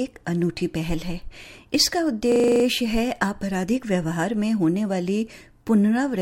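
From 2.32 to 2.64 s a system hang loop repeats one 40 ms slice eight times at 25 Hz, a machine-gun stutter of identical copies rather than random dropout glitches.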